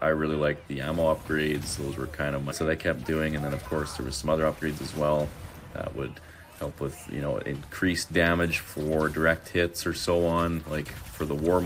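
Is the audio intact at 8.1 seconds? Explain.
Yes, the audio at 8.1 seconds is intact, with no fault at that moment.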